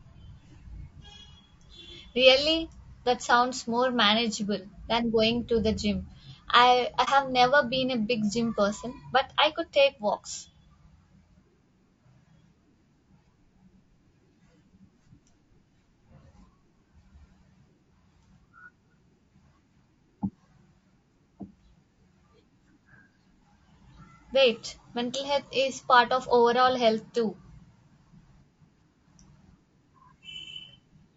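Across the whole recording the speech sounds rough and grainy, with noise filling the gaps between harmonics and a thin, somewhat synthetic top band. This is plainly audible codec damage, likely from low-delay AAC compression (AAC-ELD) at a rate consistent with 32 kbps.

From 7.04 to 7.09 s there is a brief AAC frame loss with muting. The decoder zeroed the missing spectrum, and the overlapping windows fade the sound out and back in, leaving a brief dip that fits a single dropped frame.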